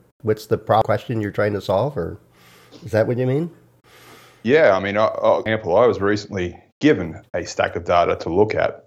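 At 0.82 s, after "what's the", and at 5.46 s, after "yeah i mean I'll", there's a glitch from damaged data in a compressed stream: the decoder lost sync on bad frames.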